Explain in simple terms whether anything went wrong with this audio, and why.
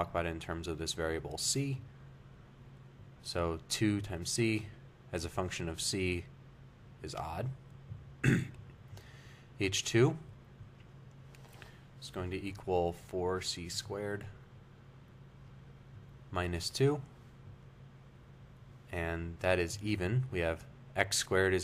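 At 10.34 s the sound skips forward very slightly. A tiny sliver, about a fiftieth of a second, is gone, and the two sides butt together. This is audio missing between chunks, likely from the recorder briefly losing sound while switching between 6-second pieces.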